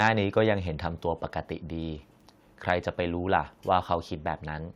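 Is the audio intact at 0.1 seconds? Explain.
No, right around there, from 0.04 to 0.07 s, there's microphone overload. The peaks run about 3 dB past the converter's limit and get flattened, leaving a harsh crackle, likely from input gain set too high.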